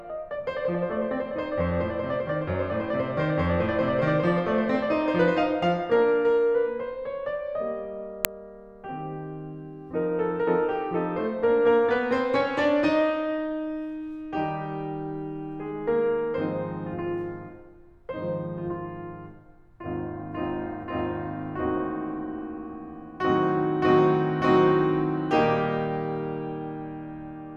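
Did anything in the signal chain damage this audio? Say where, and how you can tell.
Yes, at the driver or buffer stage: an uninitialised buffer at 8.25 s in this music produces a sub-millisecond, loud crack. A block was sent to playback before audio was written to it, so leftover memory played as samples. The 0.67 ms length fits a 32-sample block.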